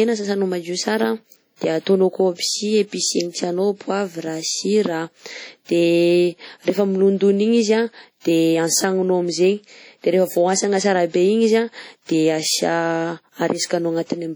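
WMA compression runs throughout the speech, heavy from start to finish: the sound has a ringing, washy quality, with a hiss that swells and recedes along with the speech. This is likely the work of a transform codec like WMA using long blocks, which smear quantisation noise across tens of milliseconds around each sound and drop weak spectral detail altogether, consistent with a low bitrate around 32 kbps. The bandwidth still extends to about 20.1 kHz.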